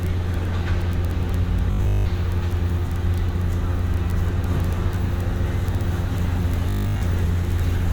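Robotic sound from repeated short buffers appears from 1.71 to 2.09 s and again from 6.70 to 7.02 s: a rigid, metallic 50 Hz buzz, likely from a 20 ms slice being looped while fresh audio was skipped, covering most of the first stretch and all of the second.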